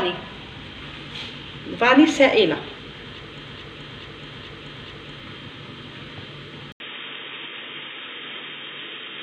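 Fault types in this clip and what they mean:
Broken-record loop, 3.48 to 5.20 s: A fragment of about 0.43 s repeats exactly, back to back, four times, so the audio stutters in place instead of moving forward. This is likely a stall in the player, encoder or stream, which kept sending the last piece it held until new data arrived. Whatever should have played during those 1.7 seconds is missing, and the sound resumes further along rather than where the loop began.
Input switched to a poorer device, 6.72 s to the end: After a gap of about 80 ms, the sound suddenly turns narrow and dull, with nothing above 3.8 kHz, while the overall level stays roughly the same. A new background noise appears, sitting around 30 dB below the signal. The likely cause is a mid-recording change of input to a band-limited device, such as a second microphone or a headset's call profile, which has its own tone and its own noise floor.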